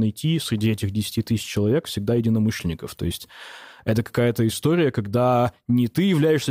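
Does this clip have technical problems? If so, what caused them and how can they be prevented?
No, nothing technical goes wrong in this speech recording, so there's no cause to track down and nothing to prevent.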